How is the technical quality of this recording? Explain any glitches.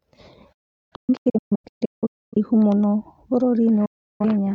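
The quality is poor because of repeated signal loss. Digital broadcast dropout mutes the speech from 0.53 to 2.37 s in scattered holes totalling about 1.4 s, the longest 0.38 s, and again from 3.85 to 4.25 s. The receiver silences corrupted frames with 8 ms fades, so the waveform shows flat gaps and the spectrogram shows empty vertical bands.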